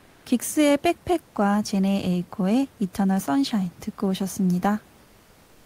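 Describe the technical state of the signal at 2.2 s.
At 2.2 s the audio is intact, with only the room's own background noise sitting about 31 dB below the speech.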